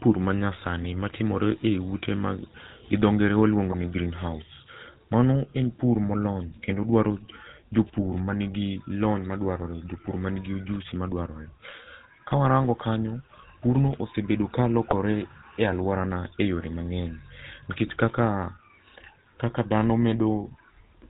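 GSM full-rate codec coding runs through the whole of this speech recording. The buzzy, gravelly roughness and the absence of anything above 4 kHz fit the 13 kbps full-rate coder. It models the vocal tract as a filter excited by regularly spaced pulses, keeping only every third excitation sample, so the fine detail of the voice is replaced by a coarse pulse train, and the damage is plainly audible. GSM bit errors then break the sound into brief squawks and gargles at 0.82–0.89 s, at 3.65–3.75 s between "ma gi dho ngere" and "ni greenhouse", at 14.89–14.94 s just after "kanyo purno ossebedo ka", and at 17.86–17.93 s. Each burst lasts about a tenth of a second or less, which points to corrupted filter, pitch or gain values reaching the decoder over a few consecutive 20 ms frames. The spectrum bends or the level jumps until clean frames return.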